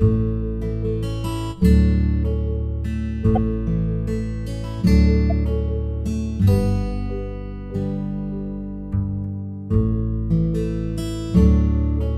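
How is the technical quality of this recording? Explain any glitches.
There are two short glitches. At 3.35–3.38 s and 5.30–5.32 s you get a corrupt frame decoded: a damaged compressed frame played anyway, its misread data spraying energy into the wrong frequencies. Each is a quick chirpy blip, the first fairly loud, the second softer.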